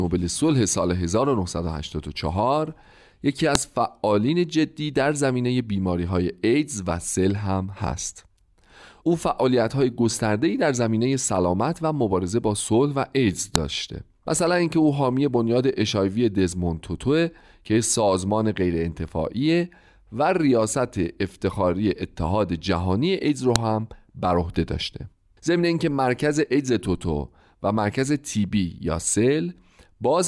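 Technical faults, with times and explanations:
3.55, 13.56 and 23.56 s: file header played as audio. A sharp, loud click cuts through the speech at each point. The pieces were joined every 10 seconds without stripping their WAV headers. Those few dozen header bytes play as raw samples, giving a brief snap regardless of the speech.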